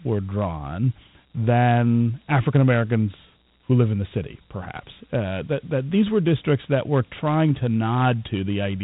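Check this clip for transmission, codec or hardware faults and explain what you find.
One codec fault runs through the whole speech clip. Dialogic VOX ADPCM, throughout: coarse 4-bit adaptive steps, fitting 32 kbps, add gritty hiss that tracks the speech. A spectrogram shows nothing above 3.9 kHz.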